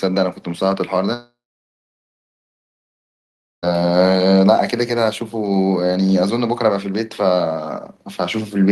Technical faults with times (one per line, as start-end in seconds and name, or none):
1.13-3.64 long network dropout